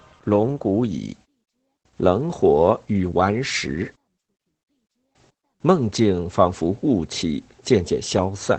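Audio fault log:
Throughout: Opus voice compression. The speech sounds muffled and a bit hoarse and robotic, with nothing above roughly 8 kHz. That's the SILK linear-prediction coder at wideband, coding the excitation coarsely, which fits a bitrate of about 12 kb/s.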